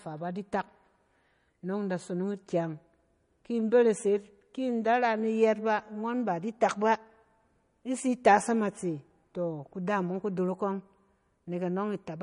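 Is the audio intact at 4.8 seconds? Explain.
No. At 4.8 seconds, as across the whole clip, the speech carries damage from what is likely MP3 compression at a low bitrate, consistent with roughly 40 kbps. With so few bits, the encoder discards weak frequency lines that then flicker on and off between frames, and it removes the treble entirely, leaving nothing above about 10.6 kHz. The result is plainly audible: a watery, swirly texture, chirpy metallic s sounds, smeared attacks, and a dull top end.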